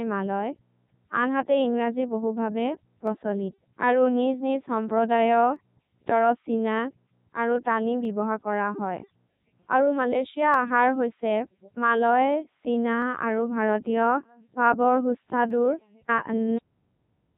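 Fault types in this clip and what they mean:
Codec 2 vocoder: The speech is rebuilt from pitch and spectral envelope at 3.2 kbit/s. It sounds robotic and buzzy, with nothing above 3.8 kHz.
Clock drift buffer slips: A click recurs every 2.49 s from 0.59 s to 15.5 s, about seven times. It is likely from two clocks drifting apart.
Cut-off end: The speech stops mid-sound at 16.58 s and drops straight to digital silence, with no natural decay.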